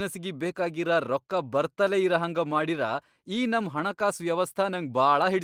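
No technical faults can be heard anywhere in the speech. There is no event to place in time, so there is nothing to describe.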